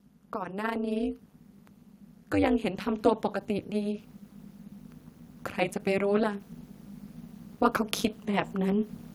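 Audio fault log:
throughout: overlap-add ripple. The speech has a harsh, metallic buzz with extra tones around each note, a ripple around 200 Hz layered over every syllable, with the level dipping by about 60 dB on each cycle so the sound almost chops on and off. The audio was split into windowed frames and rebuilt with an overlap whose windows do not add up to a steady gain, so the loudness swings once per frame. That gives a frame rate of about 200 per second.
0.32–1.28 s and 2.31–4.10 s: automatic gain rising. In both spans the voice and the background noise swell together. The first rise is about 4 dB over roughly a second, and the second is about 5 dB over nearly two seconds. The automatic gain control judged the input too quiet and raised its gain gradually, so everything it passed grew louder at once rather than the speaker getting louder.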